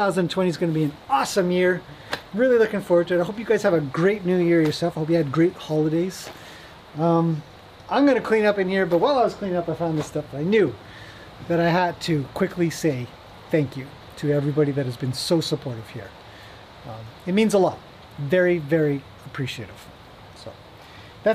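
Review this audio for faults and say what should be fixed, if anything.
Nothing stood out on listening, so there is nothing here that needs fixing.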